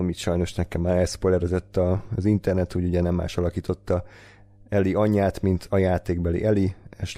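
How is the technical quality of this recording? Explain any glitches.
The recording has one fault, mains hum. Throughout, a ground loop or nearby transformer leaks the 50 Hz power line into the speech as a steady low drone roughly 30 dB down, visible as an unbroken horizontal line at 50 Hz on a spectrogram.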